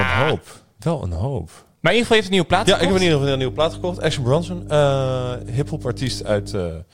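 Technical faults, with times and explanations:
2.51 to 6.57 s, mains hum: just after "heeft een nieuwe" a steady low drone at 50 Hz rises under the speech and holds to near the end, sitting roughly 15 dB below it. Its fixed pitch and constant level come from the power line leaking into the signal path, through a ground loop or a nearby transformer, so the mains frequency and its low harmonics get added to the recording.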